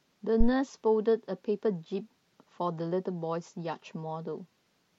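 Speech, with a phantom power thump from 0.40 to 0.49 s: a deep low thud peaking at about -12 dBFS and dying away in roughly 20 ms. That's a supply being switched on a live input, the voltage step punching through the coupling capacitors.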